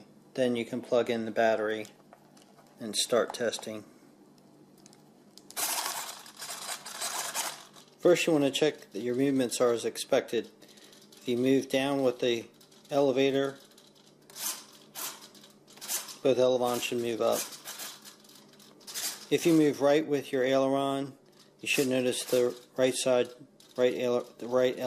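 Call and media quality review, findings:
No faults found in the recording. No defects to log; ticket can be closed without action.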